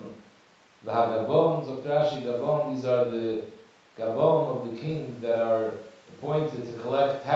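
Nothing stood out on listening to this speech clip.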